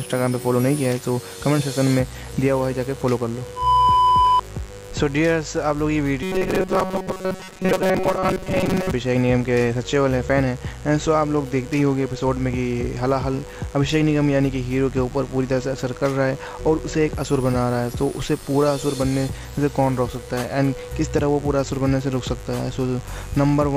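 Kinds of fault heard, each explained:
Mains buzz: A steady, raspy buzz runs under the whole clip at about 25 dB below the sound, built on 50 Hz with a spread of harmonics climbing into the kilohertz range. Sharp switching spikes, such as those from a dimmer, rectifier or unshielded lead, feed in twice per mains cycle. It stays fixed in pitch and level whatever the audio does, which separates it from the brief, pitch-locked buzz later on.
Robotic sound from repeated short buffers: From 6.23 to 8.91 s the sound turns rigid and metallic, locked to a buzz near 188 Hz that still loosely tracks the underlying audio. This is likely caused by a buffer of about 5.3 ms being replayed while fresh audio is late, so most of the real material in that stretch is skipped. Unlike the mains buzz, it is confined to this window, sits at a non-mains pitch, and replaces the sound rather than adding to it.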